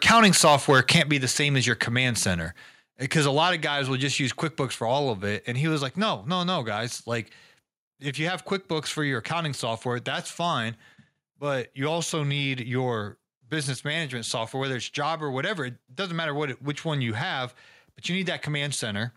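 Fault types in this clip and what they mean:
Microphone overload: likely an input set too hot, so the loudest peaks over the first second flatten at the converter's ceiling, giving a harsh crackle that noise reduction wouldn't cause.
Microphone volume stepped down: speech and background drop together in a single step, about 5 dB at 1.02 s and 1 dB at 5.13 s, likely an automatic input-gain cut rather than a fade.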